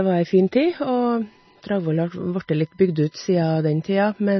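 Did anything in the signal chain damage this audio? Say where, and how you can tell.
Yes. Codec stage: heavy watery swirl throughout and nothing above 5.9 kHz point to likely MP3 compression near 24 kbps, with weak frequency lines starved of bits.

Analogue wiring: from 0.67 s onward, a fixed 1 kHz USB whine, roughly 40 dB below the speech, shows 1 ms bus frames leaking through power or ground.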